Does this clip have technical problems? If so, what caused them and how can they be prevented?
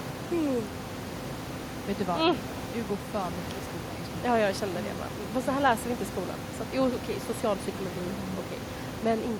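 No, no technical faults here.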